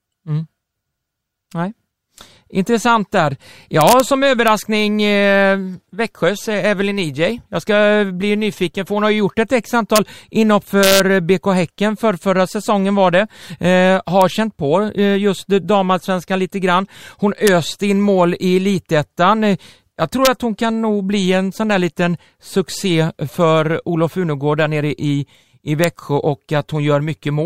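Integer overflow cracks through the speech at 3.81–4.00, 4.48, 9.96–9.98 (just after "ju gjort ett x"), 10.83–11.00, 14.22, 17.47, 20.25 and 25.84 s. Loud peaks that should have been limited wrap to the opposite sign instead, so each one snaps far harsher than clipping.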